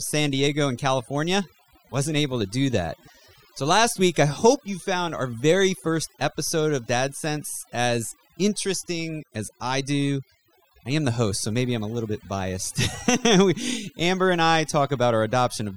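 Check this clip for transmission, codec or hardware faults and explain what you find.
The clip shows one fault, and it runs through the whole recording: overdone noise removal. A noise reduction stage was pushed too hard, so any frequency band sitting close to its noise estimate is pulled far down or removed, and the softer parts of the speech are removed along with the noise. Between phrases the background falls to near silence with twinkling specks. On a spectrogram, the gaps show a dark floor scattered with isolated bright dots, and the speech harmonics look patchy and eaten away at their edges.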